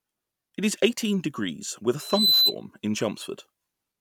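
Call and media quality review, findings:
Loudspeaker feedback squeal, 2.0 to 2.55 s. Steady 4 kHz tone, swells over roughly a third of a second to about 10 dB above speech. Probable component: mic picking up its own speaker. Loop gain exceeds unity at 4 kHz.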